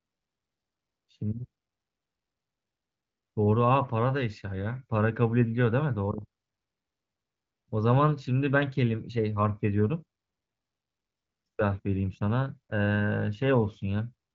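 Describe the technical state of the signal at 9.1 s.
At 9.1 s the signal is intact, with no fault, the speech carried cleanly through the AMR wideband (HD Voice) codec at about 15.85 kbit/s with nothing above roughly 7.5 kHz.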